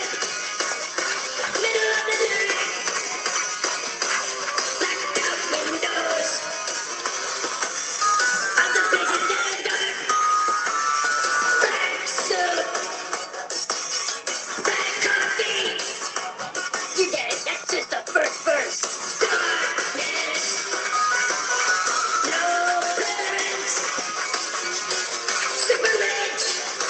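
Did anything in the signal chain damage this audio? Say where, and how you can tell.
No, nothing in the signal chain damaged this audio.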